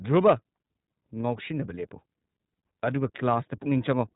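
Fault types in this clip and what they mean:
iLBC codec: speech sounds muffled and slightly rough, nothing above 3.8 kHz; narrowband coding of independent 30 ms frames, fitting about 13.33 kbps, plainly audible.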